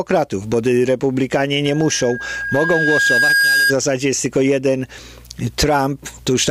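At 1.65 s a loudspeaker feedback squeal begins. A microphone is picking up the loudspeaker it drives, and at 1.6 kHz the loop gain exceeds unity, so that frequency keeps recirculating and growing. It is heard as a single steady tone that swells over roughly two seconds to sit around 5 dB above the rest of the sound. At 3.74 s it ends.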